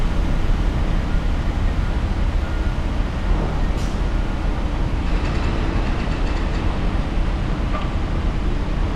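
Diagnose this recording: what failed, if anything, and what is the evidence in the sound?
Nothing in the chain seems to have failed here; the sounds come through steady and intact, with nothing in the audio pointing to a problem at any stage.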